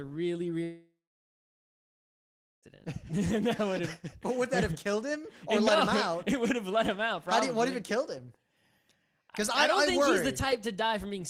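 From 0.63 to 2.66 s the sound fades into a brief buzz, then 1.7 s of silence: a long network dropout, likely losing 2 s.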